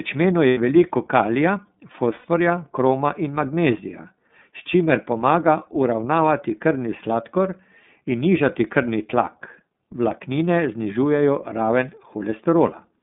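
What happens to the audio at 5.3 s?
At 5.3 s you're hearing the iLBC codec, but it isn't a one-off: the same treatment runs through the whole clip. The speech sits in a narrow phone band, roughly 150 Hz to 3.6 kHz, so there's no air or sparkle up top. Each 30 ms frame has its excitation coded on its own, without borrowing from the previous one, and that gives the speech a plainly audible rough, slightly synthetic texture, which fits the 13.33 kbps mode.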